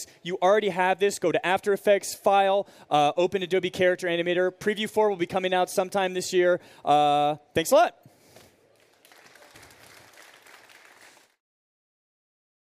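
No technical faults can be heard anywhere in the audio, with the signal holding steady and intact throughout.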